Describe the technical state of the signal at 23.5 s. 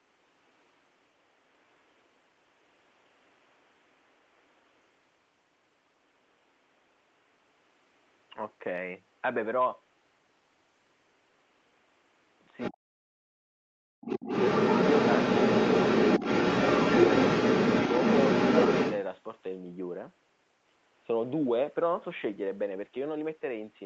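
At 23.5 s the speech is intact, with no fault in the signal; the room noise sits about 34 dB below the speech and the call path's band limit at 8 kHz is normal.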